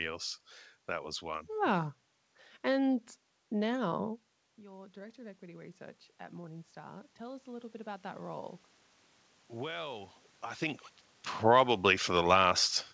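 At about 4 s the talker moves back, and the input drops by about 17 dB. Automatic gain rising follows from 4.55 to 8.57 s. The gain control slowly climbs by about 8 dB. Voice and room noise swell together, only partly recovering the level.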